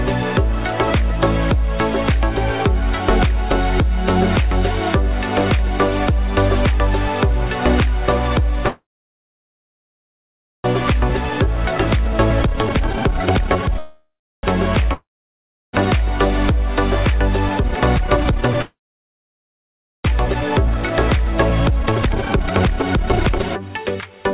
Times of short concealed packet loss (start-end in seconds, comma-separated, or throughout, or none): none